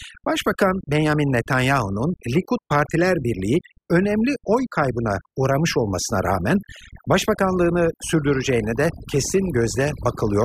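Overdone noise removal runs through the whole recording: a noise reduction stage was set far too aggressively, so any frequency band that drifts close to its idea of the background noise gets pulled right down or switched off, and softer parts of the speech are caught along with it. The result is a background that drops away and breaks up into twinkling specks.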